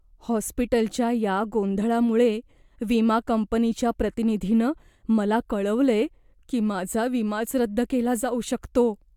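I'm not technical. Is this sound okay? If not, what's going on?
Yes, nothing in this recording points to a technical fault.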